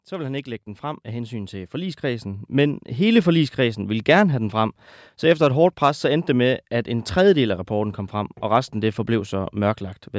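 From 0.09 s to 4.05 s an automatic gain rising fault is at work: the call's gain control judged the incoming level too low and stepped its gain up by about 13 dB over those four seconds. Because the control acts on the whole signal, the speech and the room noise behind it swell together, so the clip grows steadily louder until it settles just before "gerne have den frem". The band stops at 8 kHz, as the call's microphone path normally leaves it.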